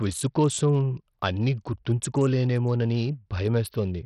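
From start to finish the speech carries heavy damage: nothing above about 16.1 kHz, flickering treble and gritty aliased noise, pointing to roughly 64 kbps. Likely Bluetooth SBC compression, whose hearing-model-free bit allocation starves whole upper bands rather than smearing them.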